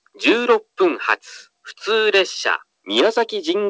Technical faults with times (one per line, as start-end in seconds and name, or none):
none